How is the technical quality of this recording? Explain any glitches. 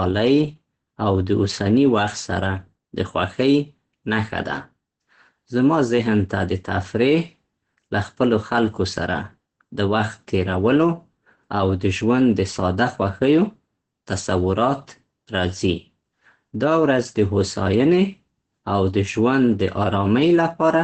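The recording is heavily degraded by codec damage from start to finish, most likely Opus compression at a very low bitrate. The sound suggests the encoder was starved of bits, at a rate around 12 kbps, and fell back to its speech-oriented SILK mode, limited to wideband. Nothing is present above about 8.4 kHz, so the speech sounds muffled and dull, and the heavy coding leaves it hoarse and rough throughout.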